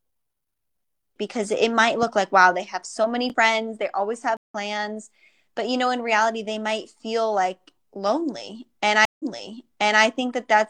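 At 2.03 to 2.05 s, after "because it might", a single loud pop rises a few decibels above the speech, likely a stray voltage pulse from a switch, plug or static. Unlike a dropout, the speech carries on underneath the thump without a gap. Before "like wow they have".

Two stream reconnects follow. After "many friends they always", the audio goes silent for 133 ms around 4.37 to 4.55 s and resumes roughly 150 ms further on. After "might feel like lonely", a 143 ms silence at 9.05 s is followed by a fresh start 836 ms earlier, so the speech up to 10.03 s repeats. What separates these from plain dropouts is the jump in position after each silence, skipping material once and replaying it the second time.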